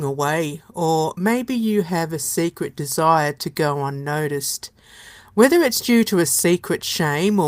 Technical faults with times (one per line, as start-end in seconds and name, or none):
none